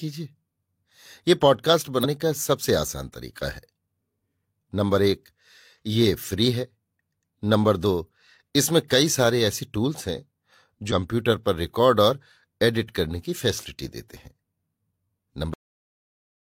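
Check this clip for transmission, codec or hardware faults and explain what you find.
Two kinds of fault are present: two short bursts of damaged data in a compressed stream, and a cut-off end.

The damaged data appears at 2.00 to 2.05 s and again at 10.87 to 10.92 s. Each event lasts about 50 ms. Part of the compressed stream was wrong at those points. The decoder misread the affected frames and lost sync. It then had to hunt for the next valid frame header. The speech breaks into a brief chirp, squawk, click or short hole before it resumes.

The cut-off end comes at 15.54 s. The speech stops in the middle of a sound, with no natural decay. From there to the end of the clip there is only digital silence. The last buffers were never written or played out, so the recording simply ends where the data stops. The sudden drop may carry a click.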